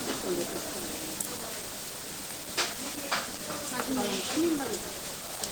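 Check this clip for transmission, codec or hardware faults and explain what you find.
One codec fault runs through the whole clip, and it is most likely Opus compression. For the full length, the encoder squeezes the sound into about 16 kbps using its hybrid mode. Its parametric low band and energy-matched upper bands make the sound plainly hoarse, rough and grainy, and nothing lies above about 20.1 kHz. Unlike MP3 damage, there is less swirling or holey warble.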